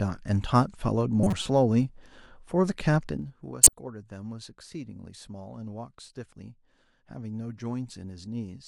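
Corrupt frame decoded at 1.23 to 1.46 s and again at 3.63 to 3.73 s: damaged compressed frames were played anyway, so misread data spread energy into the wrong frequencies. The speech breaks into a squeaky, noisy burst, the first spanning what sounds like about seven frames and peaking near -10 dBFS, the second shorter and louder, near -5 dBFS.

Zipper noise from 3.00 to 3.38 s: the level drops by roughly 15 dB in unsmoothed 1 dB steps, around 40 per second. Each jump leaves a small click, so a rapid ticking rides on the speech while the level falls.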